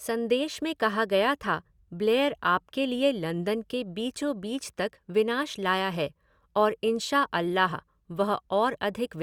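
Nothing in this speech recording stands out as a technical fault, so there's really nothing to flag here.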